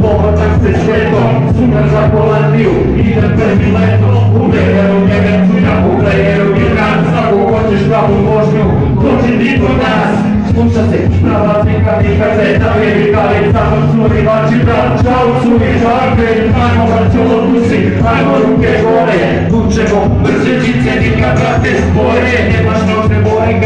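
No technical faults can be heard anywhere in this recording.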